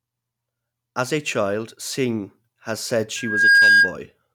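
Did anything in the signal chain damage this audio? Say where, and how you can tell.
Yes, there's loudspeaker feedback squeal in the analogue acoustic path. Right after "has said", a 1.6 kHz tone swells over about a third of a second from 3.16 s, sits about 15 dB above the speech, and stops at 3.95 s. The mic is hearing its own loudspeaker, and the loop gain at that frequency tops one.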